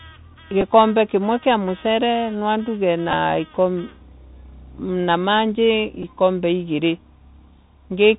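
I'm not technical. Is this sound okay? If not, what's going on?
No, not quite. This speech sounds like it came through a Bluetooth headset microphone, using the Bluetooth CVSD headset codec. That is the basic phone-call mode of a headset. It keeps only the lower part of the sound, nothing above 4 kHz. So the voice sounds thin and muffled. The s sounds come out scratchy. A gritty hiss sits under the talking the whole time. Loud, bright moments get rough.

There are also three tiny glitches where a Bluetooth headset packet was repeated. The wireless link briefly dropped a few small chunks of sound. The headset filled the gap by replaying the last chunk it had. You hear a short tick or brief buzz. The first is at 0.61 s, just before "kimwe kia mucore nwanduge". The second, about twice as long, runs from 3.11 to 3.14 s, right after those same words. The third is at 6.03 s.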